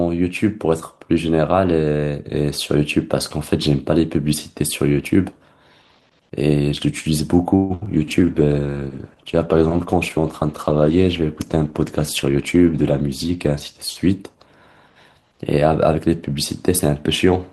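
At 7.55 s the speech stops moving forward for about 145 ms, until 7.72 s. The last sound is stretched into a fading buzz or hiss, and then the speech resumes where it left off with nothing lost. This is a call audio freeze, most likely caused by packets arriving late and the jitter buffer running dry. The pause adds about 145 ms of delay.

Two cases of short concealed packet loss follow immediately, at 7.80–7.83 s and 7.85–7.88 s. About 20 ms and 40 ms of audio never reached the decoder. The receiver papered over the gaps by extending the preceding sound, which produces brief smears or wobbles. The second gap also cuts the delay by roughly 30 ms.

From 7.96 s to 14.74 s there is a call bitrate drop. The encoder is pushed from 40 kbps down to 15 kbps and stays at the lowest rate for about 5.3 s. Through that stretch the coarser coding makes the speech rougher and more muffled, with less high-frequency content.

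Overlapping the start of that, from 7.98 s to 8.35 s, a jitter buffer slow-down plays the speech at about 90% speed with unchanged pitch. Repeated pitch periods add 46 ms to rebuild the buffer, which draws out the sounds.

From 12.26 s to 13.32 s a jitter buffer speed-up runs the speech at about 112% speed. Short pitch-period slices totalling about 150 ms are cut to shed excess buffered delay, so the speech sounds hurried while the pitch stays the same.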